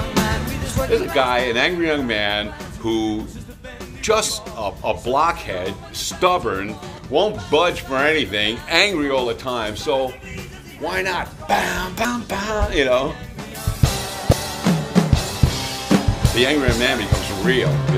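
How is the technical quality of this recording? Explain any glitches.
Technical quality is marred by four short glitches of damaged data in a compressed stream, at 4.26–4.29, 6.95–6.99, 12.02–12.05 and 14.29–14.33 s. Each is a roughly 30 ms chirp or blip, where the decoder misreads corrupted frames and loses sync until the next header.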